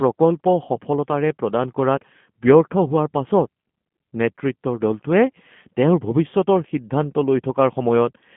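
From start to finish the speech carries G.729 codec damage, with a sound that fits G.729A at 8 kbit/s. The codec rebuilds each frame from a modelled vocal tract, a pitch predictor and a handful of pulses, so voicing turns plainly rough, buzzy and synthetic. Everything sits on a telephone band from 150 Hz to 3.4 kHz. A spectrogram shows an empty region above 3.4 kHz and smeared, grainy harmonics below it.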